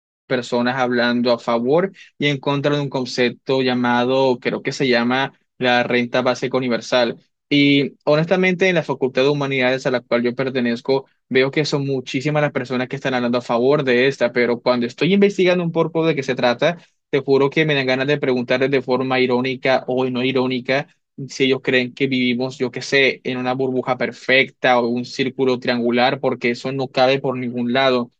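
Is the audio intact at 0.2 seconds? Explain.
Yes, the speech is intact at 0.2 s.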